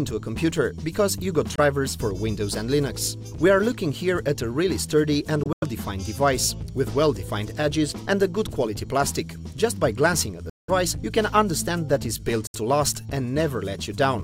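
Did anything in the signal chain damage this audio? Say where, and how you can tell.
Yes, at the playback stage, likely a Bluetooth dropout. There are silent holes at 1.56–1.60 s, 5.43–5.64 s (broken up), 10.50–10.70 s and 12.47–12.55 s. Each gap is a multiple of about 23 ms, which fits lost frames. The waveform goes flat, the spectrogram shows full-band vertical gaps, and the sound resumes as though it had played on.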